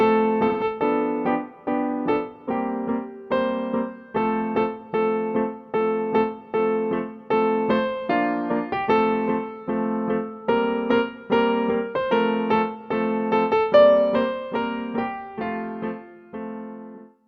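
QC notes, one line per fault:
0.48–0.64 s: AAC frame loss with concealment. About 128 ms of audio is missing, which fits three lost frames in a row. The decoder rebuilt the gap from the last good spectrum, by scrambling signs or by interpolating energy. That fill gives a smeared, noisy or phasey patch in place of the real sound.
16.95 s: AAC frame loss with concealment. This gap is shorter, about 43 ms, which fits one lost frame. The same spectral fill-in covers it, so it is a brief patch of the same kind.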